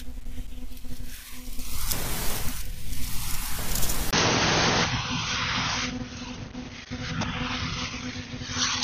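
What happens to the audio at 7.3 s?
The input switched to a poorer device, most likely another microphone or a headset's call profile, and 7.3 s falls inside that stretch, which starts at 4.11 s and lasts to the end. A gap of about 20 ms marks the switch. The new device passes nothing above 6.4 kHz, so the speech turns dull and boxy, with a different background noise around 40 dB below it, while the level stays about the same.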